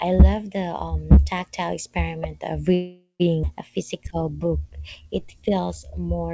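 At 2.74 s the speech stops moving forward. The last sound carries on as a fading buzz or hiss for about 0.46 s, and the final 120 ms or so goes silent. Speech resumes at 3.22 s from exactly where it halted, so nothing is lost. It only arrives late. This is a call audio freeze. The likely cause is packets held up in transit, which left the jitter buffer empty, so the receiver stretched out the last sound to fill the wait.

Shortly after, at 3.42 s, there is a skip ahead. The jump is almost seamless, with only about 13 ms of filler across the join, which ends at 3.45 s. Roughly 0.3 s of speech is simply gone. A stretch was dropped, in transit or by the jitter buffer, while later audio was already queued. The two sides of the cut sit nearly back to back, so the speech lurches abruptly onward.

From 3.71 s to 6.17 s comes a jitter buffer slow-down. The buffer was running low or had just raised its target delay, so the receiver repeated single pitch periods and slivers of pauses over and over to rebuild its reserve. 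This adds about 0.3 s in total. The speech plays at about 88% of normal speed but at unchanged pitch. Sounds are drawn out. Throughout, the G.722 call path leaves nothing above 8 kHz.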